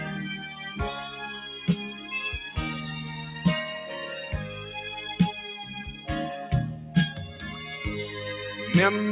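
Throughout, a speech-tuned noise suppressor applied to music or sounds treats steady content as noise, so the level swings by roughly 5 dB and held parts pump, unlike a plain level change. The audio is band-limited with nothing above 4 kHz, which fits a G.711 mu-law call path at 64 kbps. At 1.93 to 2.09 s, 5.90 to 6.08 s and 6.76 to 6.95 s, sound is cut by the noise suppressor, sinking by about 6, 7 and 6 dB. Sustained and decaying material drops while sudden onsets survive, which distinguishes this from a dropout or packet loss.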